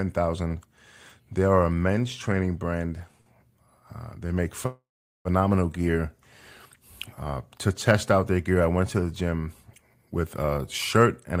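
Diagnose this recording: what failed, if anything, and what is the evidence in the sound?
Short stall from a late packet, 3.21 to 3.29 s, just after "a men's training brand". At the network and jitter-buffer stage, a packet missed its playout time and the buffer ran dry. The receiver held the last sound for about 53 ms, audible as a brief smeared hold with a faint buzz, then resumed exactly where it stopped. Nothing is lost, but everything after this point plays 53 ms later than it should.

Call audio freeze, 4.66 to 5.28 s, right after "they make". The sound sustains as a fading buzz and then drops to silence for about 420 ms, a gap of roughly 0.59 s in total, before picking up again with nothing skipped. The likely cause is packets delayed in transit on the network, emptying the jitter buffer while the receiver filled the wait and added another 591 ms of delay.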